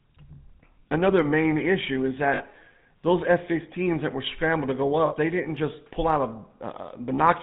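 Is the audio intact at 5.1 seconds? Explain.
No. Between 5.06 and 5.15 s the audio breaks up with lost GSM frames. For about 60 ms, which fits three consecutive 20 ms frames going missing, the decoder has no fresh data and keeps resynthesising from the last good frame's settings. The result is a brief, rough, metallic ring sustained over the gap. That sustained ring is the mark of frame concealment; a plain dropout would leave a clean silent hole or a hard click instead.

Under that, and through the whole clip, runs the GSM full-rate codec, with damage that is plainly audible, consistent with the 13 kbps full-rate coder. The speech is rebuilt from a vocal-tract model driven by sparse, regularly spaced pulses, so it takes on a buzzy, gravelly roughness, and nothing above 4 kHz gets through. A simple low-pass filter would dull the top end without adding that grainy buzz.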